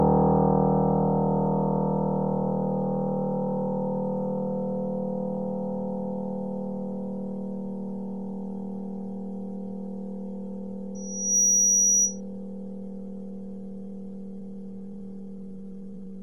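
From 10.95 to 12.21 s a loudspeaker feedback squeal takes over: a microphone-to-speaker loop exceeds unity gain at 5.8 kHz, swelling within about 0.4 s to roughly 10 dB above the sound. A spectrogram shows one bright horizontal line; the waveform's envelope balloons.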